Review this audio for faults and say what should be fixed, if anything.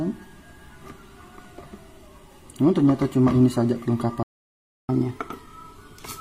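A playback stall silences the output from 4.23 to 4.89 s, a gap of 660 ms, most likely because the player's buffer ran dry before the sound resumed.

Catch-up at higher speed follows from 4.89 s to the end: playback runs at 1.1x, raising pitch about one and a half semitones while the backlog drains.

To prevent both, enlarge the playback buffer or fix the thread starvation, and drop or time-stretch the backlog instead of resampling it upward.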